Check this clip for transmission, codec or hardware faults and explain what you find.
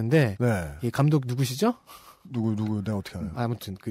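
There is one fault, microphone overload, from 0.13 to 0.24 s. The speech peaks are pushed about 3 dB past the converter's limit, so a small share of samples have their tops flattened, giving a harsh, crackling edge. The likely cause is input gain set too high. Unlike codec distortion, the crackle follows only the loudest moments, not particular frequencies.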